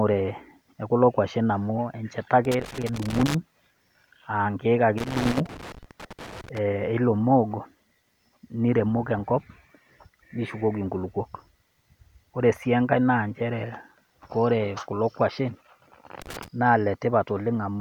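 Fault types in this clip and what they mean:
Loose connector crackle: a worn contact keeps making and breaking, chopping the signal. Three scratchy bursts occur at 2.45, 4.98 and 16.22 s.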